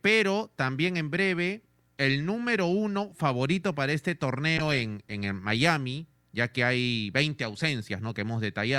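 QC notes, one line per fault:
4.59 to 5.67 s, call bitrate drop: the call's bandwidth estimate fell and the encoder was pushed from 64 kbps down to 26 kbps, sitting at that floor for about 1.01 s. With so few bits, Opus quantises the speech far more coarsely and trims the upper band, so this stretch turns muffled, rough or watery until the rate climbs back and the brighter, cleaner coding returns.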